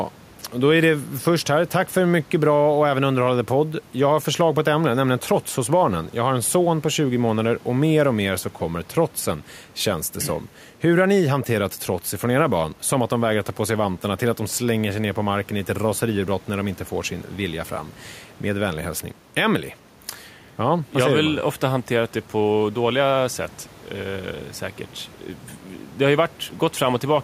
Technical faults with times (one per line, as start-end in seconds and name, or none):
none